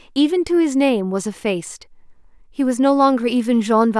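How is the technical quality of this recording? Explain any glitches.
No glitches to report: the recording shows no technical faults.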